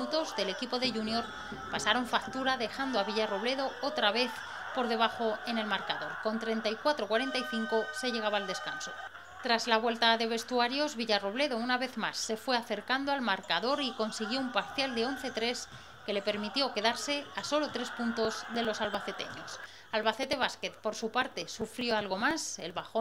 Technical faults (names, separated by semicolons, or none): periodic USB or driver dropouts